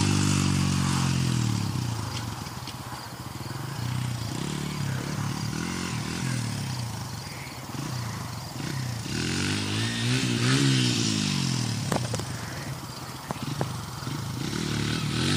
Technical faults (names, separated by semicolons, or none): none